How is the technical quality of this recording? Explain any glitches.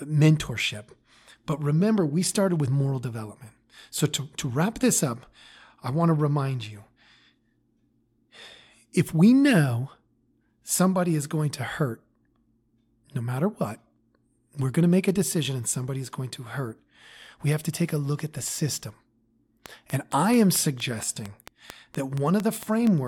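The recording has one clear fault. From 19.66 to 22.88 s a train of clicks runs over the speech. About fifteen similar pulses arrive at a steady 4.4 per second, peaking around 10 dB above the speech. Their likely source is electrical interference or a faulty connection. They are heard as regular ticking.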